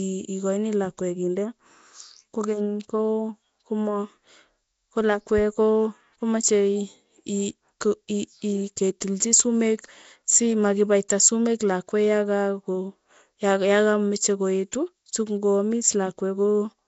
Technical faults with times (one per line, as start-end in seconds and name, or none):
0.00-16.87 Nellymoser compression
9.01 pre-echo